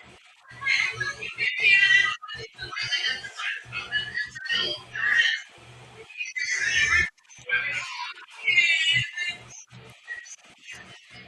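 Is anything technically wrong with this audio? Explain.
No, nothing technically wrong can be heard anywhere in this speech recording.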